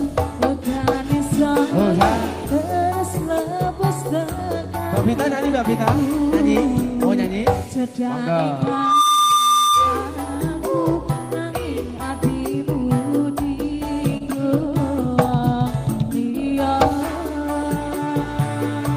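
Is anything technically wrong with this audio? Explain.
Yes, there are two faults.

From 8.63 to 10.19 s there is loudspeaker feedback squeal. A microphone is picking up its own loudspeaker, and at 1.2 kHz the loop gain passes unity. The tone builds over a little under half a second into a steady squeal about 5 dB above the rest of the sound.

From 14.17 to 14.23 s there is a short stall from a late packet. The jitter buffer ran dry, so the receiver held the last sound for about 29 ms until the packet arrived, then resumed where it left off. Nothing is lost, but playback falls 29 ms later and the held sound is briefly drawn out.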